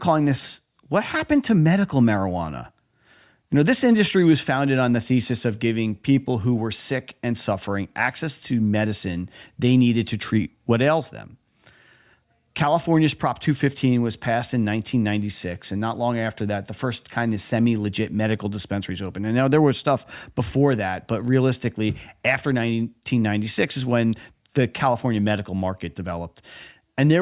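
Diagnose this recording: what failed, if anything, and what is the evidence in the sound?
Nothing in the signal chain appears to have failed: the speech plays through with no audible break, distortion or timing disturbance anywhere in the recording.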